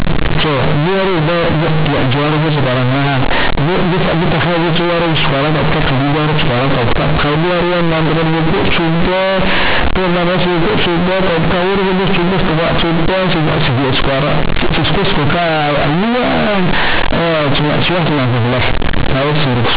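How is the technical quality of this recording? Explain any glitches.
The technical quality is poor: the whole speech recording is badly distorted from start to finish. The fault is companded audio read as linear. The speech was coded as mu-law G.711 telephone audio, with its 8 kHz sampling and 4 kHz ceiling audible, but the bytes are being played as plain linear 8-bit samples without expansion. Each sign change then throws the waveform across roughly half the output range, flattening quiet and loud parts to similar size. The result is harsh, very loud, buzzy distortion with heavy noise filling the pauses.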